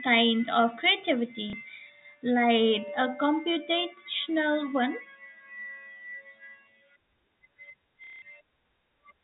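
Speech over a G.711 telephone-band path, with packet loss and the last packet repeated in two spots: a brief 30 ms blip at 1.50 s, and a 180 ms robotic stutter from 8.04 to 8.22 s buzzing around 33 Hz, which fits 30 ms packets.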